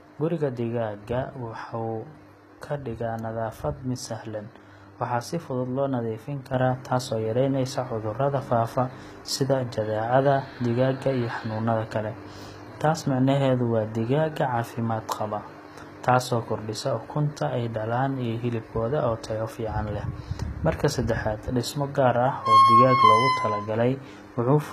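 Throughout, the speech has gritty, metallic sibilants and nothing above 14.9 kHz, likely HE-AAC compression rebuilding the treble from copied lower bands, which fits roughly 20 kbps; spectrograms show repeated, smeared upper-band texture. At 6.54 s, a sudden gain jump of about 6 dB lifts speech and noise floor together, likely an unramped digital gain change, appearing as an abrupt waveform step.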